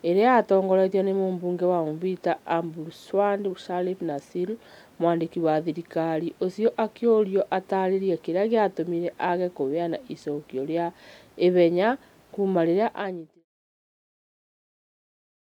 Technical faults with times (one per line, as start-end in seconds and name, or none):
none